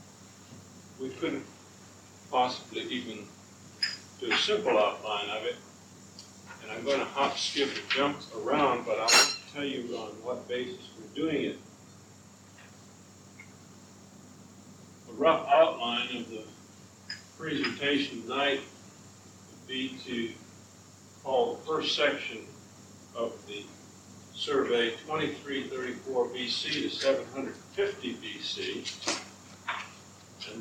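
No technical faults are audible.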